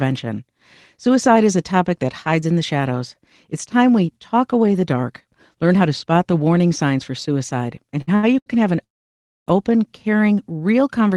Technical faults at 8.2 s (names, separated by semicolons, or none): short stall from a late packet